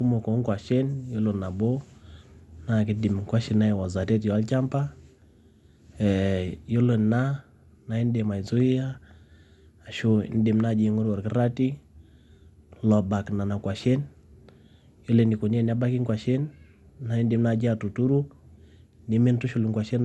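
Repeated lossy encoding has degraded this speech recording throughout, most likely generation loss from about seven successive passes through a codec whose character fits MP2 at around 96 kbit/s. Each re-encode requantises on a shifted frame grid, so the errors stack: the sound is swirly and hollow, consonant attacks are smeared, and nothing remains above 11.8 kHz, leaving the top end dull.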